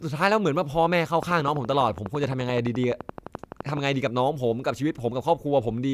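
A train of clicks runs from 1.23 to 3.78 s: about 30 evenly spaced pulses at 11.8 per second, each jumping around 10 dB above the speech. Likely caused by interference from nearby equipment or a faulty connection or power supply, they tick steadily through both speech and pauses.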